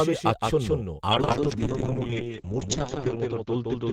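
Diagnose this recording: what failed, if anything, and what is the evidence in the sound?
A doubled audio track runs throughout: a dry, full-band copy trails by roughly 150 ms, a few dB quieter, likely from a second, slower capture path.

From 1.12 s to the end, a call bitrate drop at the codec makes the speech rough and muffled. Bandwidth falls to 8 kHz, consistent with a starved encoder, worst for about 1.6 s.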